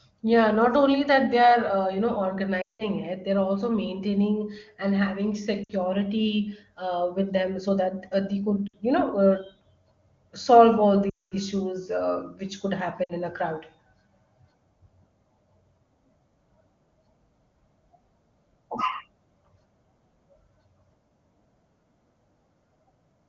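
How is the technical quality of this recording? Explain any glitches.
The recording has five short dropouts from lost AMR speech frames, heard over clear HD Voice wideband audio. They occur at 2.61–2.86 s, 5.63–5.72 s, 8.67–8.76 s, 11.09–11.35 s and 13.04–13.13 s. Corrupted frames were discarded. The decoder then repeated the last good speech settings with falling gain. The 60 ms gaps drop to near silence within two frames. The 180 ms and 220 ms runs also drop to near silence within two frames.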